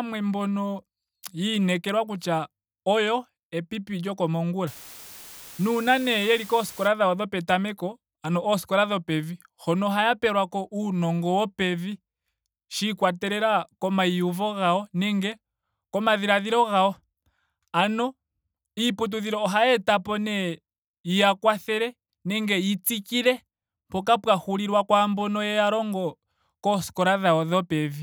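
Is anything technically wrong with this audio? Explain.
Yes. From 4.67 to 6.88 s, just before "dhawo dhopetameko ano ooskola", there is low bit depth with dither. Samples were rounded to few levels, consistent with about 7 bits, after dither was added. This turns the error into a constant, even hiss roughly 20 dB below the speech, without distortion.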